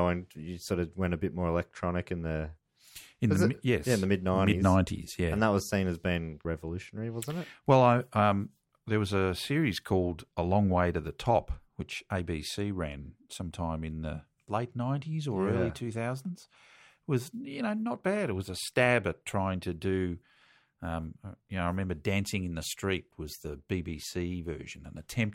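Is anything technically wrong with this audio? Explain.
No, no technical faults here.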